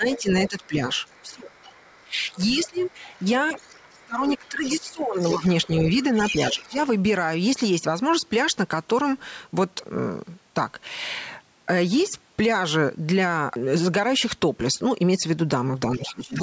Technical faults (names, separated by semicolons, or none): speech suppressed in double talk; other side's voice leaking through